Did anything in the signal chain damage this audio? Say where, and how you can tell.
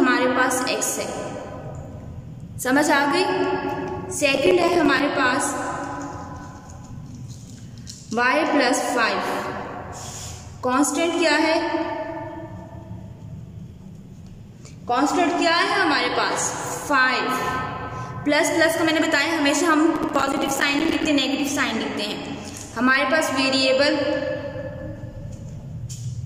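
Yes, at the driver and buffer stage: the processor repeatedly missed its deadlines, causing processor overload crackle at 4.35–5.00 s and 19.96–21.07 s. Each missed buffer, around 5 ms, became a hard-edged gap of silence, and roughly 15 and 40 of these respectively merge into gritty tearing.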